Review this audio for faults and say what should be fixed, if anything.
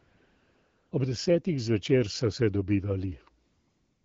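AMR comfort noise fills 0.00 to 0.91 s and 3.47 s to the end. The phone judged these stretches silent, sent no speech frames, and the receiver synthesised smooth, steady noise. Unlike a noise gate, which leaves true silence, the pauses carry even hiss that switches in and out against the lightly coded wideband speech. To prevent it, disable discontinuous transmission or tune voice activity detection so quiet background is transmitted as real audio.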